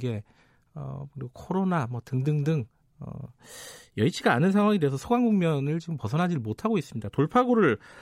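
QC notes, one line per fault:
No faults heard anywhere in this speech recording.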